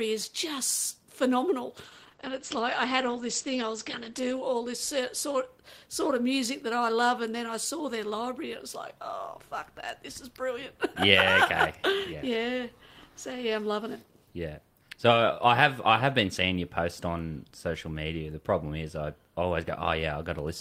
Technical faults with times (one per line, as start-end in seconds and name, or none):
1.84-5.53 call bitrate drop